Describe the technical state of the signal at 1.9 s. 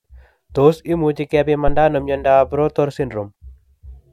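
A phantom power thump runs from 1.68 to 1.88 s, ending just before "ano miondop". A supply switched on or off on a live input sends a step through the coupling capacitors. It sounds like a deep thump, peaking near -6 dBFS and decaying in about 45 ms.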